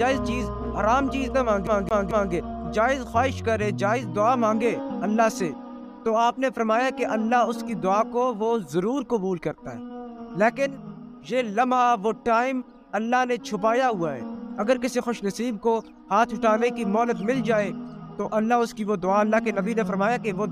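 From 1.67 s to 2.33 s the CD is stuck on one turn: a scratch throws the laser back a track at the same point each rotation, so a 0.22 s slice of sound plays three times, muting briefly at every jump, a quick, even skipping stutter.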